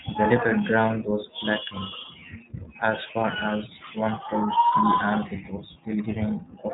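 The iLBC codec runs through the whole speech clip. It codes each 30 ms frame's excitation on its own, which gives the voice a plainly rough, synthetic edge, with a sound that fits its 13.33 kbps mode. Nothing above 3.8 kHz survives, so the speech sounds muffled and narrowband.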